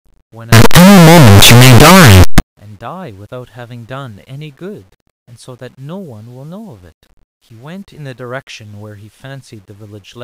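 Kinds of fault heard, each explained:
Signed and unsigned mixed up: from 0.52 to 2.40 s the speech becomes loud, harsh distortion. The likely cause is 8-bit samples read with their top bit flipped.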